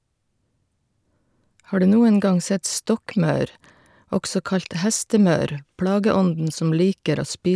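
No technical faults can be heard anywhere in the speech.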